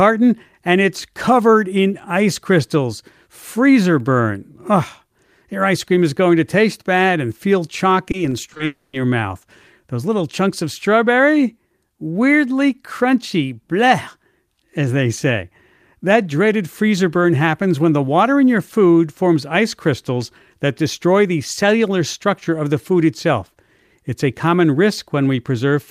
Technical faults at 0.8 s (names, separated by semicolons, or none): none